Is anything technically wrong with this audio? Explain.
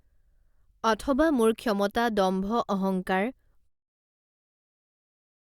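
No, nothing technical stood out on listening to this speech, and the level easing down to silence by about 3.7 s is an ordinary, smooth fade-out.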